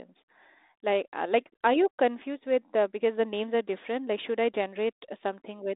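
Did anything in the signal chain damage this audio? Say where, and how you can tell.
No, nothing in the signal chain damaged this audio.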